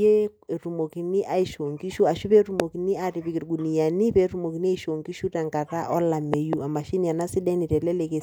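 At 2.60 to 2.62 s, then 6.34 to 6.55 s as a double hit, a loud pop stands well above the speech, likely a voltage pulse from a plug, switch or static. Unlike a dropout or digital click, the speech carries on unbroken underneath.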